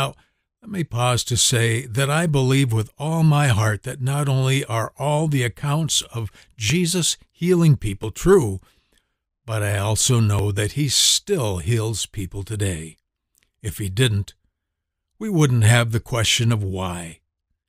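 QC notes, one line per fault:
6.70, 8.03, 10.39 and 11.60 s: dropped buffer (overrun), heard as the speech jumping forward. It occurs after "all the accounts of" at 6.70 s, between "but I also" and "that he still" at 10.39 s, and just before "people today" at 11.60 s. Each jump skips roughly 10 to 40 ms of sound, with the longest at 10.39 s. The likely cause is that samples were overwritten before the program read them. On the waveform each one is an abrupt step with no silent gap, and on a spectrogram it is a thin vertical broadband line.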